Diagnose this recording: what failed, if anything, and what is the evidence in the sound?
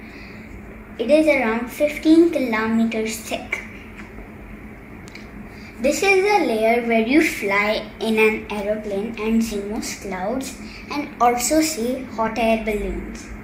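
The codec stage failed: compressed frames skipped at 9.51 s and 12.27 s, where the audio jumps ahead by roughly 40 ms and 20 ms, whole multiples of 20 ms frames. Each join is a jump ahead in the audio, unlike a buffer dropout's silent gap.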